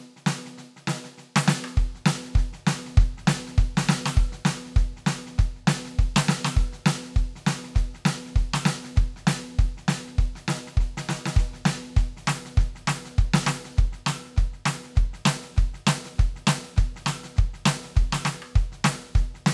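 Listening to this music clip, nothing technically wrong stood out.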